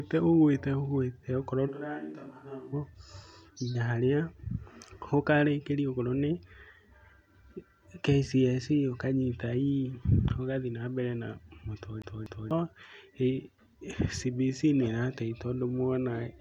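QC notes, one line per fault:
1.70–2.72 s, switch to a distant microphone: The close microphone's feed likely dropped out for about a second, leaving only a pickup much further from the talker. The speech suddenly turns roomy and hollow, thins in the bass and falls by about 10 dB, while room noise rises to about 40 dB below the speech. The distant mic hears more of the room's reflections than the direct sound, so the tone changes abruptly at both edges of the stretch.
12.02–12.51 s, CD stuck on one turn: The playback jumps back by a fixed amount at the same point on successive passes, as when a scratch knocks a disc player's laser back a track each rotation. The same 0.24 s slice of speech is repeated twice, with a brief mute at each jump. Because the loop length stays constant, the stutter is fast and evenly spaced, the characteristic sound of a skipping CD.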